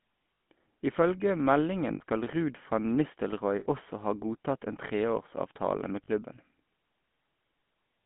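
From start to finish the speech has a buzzy, gravelly roughness, and it sounds boxed in: nothing comes through below about 150 Hz or above about 3.5 kHz. This is the GSM full-rate codec, which fits a 13 kbps mobile link. It rebuilds the voice from a vocal-tract model driven by regularly spaced pulses, which keeps only a thinned-out version of the excitation. That coarse pulse train is what gives the voice its rasp.

Four short patches of lost GSM frames start at 0.34, 1.94, 3.6 and 6.04 s. Each one sounds like a brief rough, metallic ringing in place of the voice. The first three hold for about 60 ms each and the last for about 40 ms, which points to two or three 20 ms frames going missing each time. The decoder fills each gap by repeating the last good frame's settings, so the sound freezes into that ring until clean frames resume.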